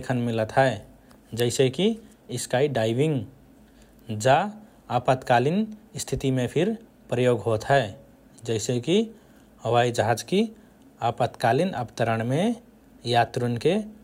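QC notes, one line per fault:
No faults heard in this speech clip.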